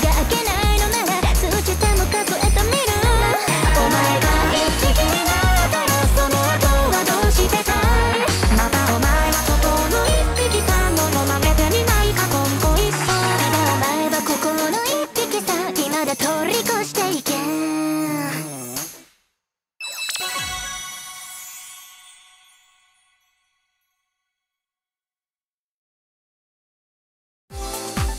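No technical faults can be heard anywhere in this audio.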